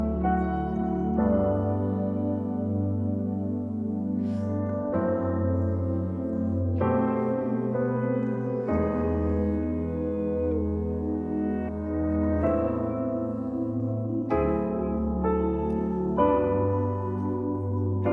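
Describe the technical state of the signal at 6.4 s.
At 6.4 s the signal is intact, with no dropout, clipping, glitch or other fault audible at that point.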